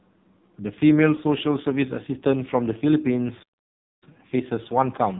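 From start to finish the speech carries the sound of the AMR narrowband mobile codec. Nothing above 4 kHz survives. Damage is heavy, and the buzzy, synthetic tone points to one of its lowest rates, near 6 kbps. The vocal tract model has very few bits to work with.

At 1.16 to 1.20 s, a single lost AMR speech frame causes a brief dip or warble of about 20 ms. The decoder filled the gap by repeating the last good settings at falling gain, and the sound then returns weak or rough for a moment.

At 3.43 s the audio stops mid-flow and stays silent until 4.03 s, a gap of about 0.59 s. This is a playback stall. The likely cause is that the player ran short of data or was blocked, so output halted until it recovered.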